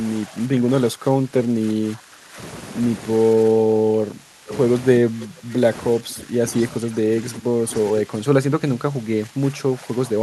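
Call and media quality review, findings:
Speech suppressed in double talk: level dips at 0.04–2.38, 3.34–4.51 and 5.0–5.54 s (down about 15 dB), then 5.97–6.4 s and 6.8 s to the end (about 10 dB). Likely the echo canceller ducking the near talker while the far side talks over it.

Echo leak: short delayed copies of the voice at 4.49–4.58 s (about 15 dB under the speech) and 7.73–7.8 s (about 25 dB under), trailing by 466 ms. Likely residual echo from a speakerphone end getting past its canceller.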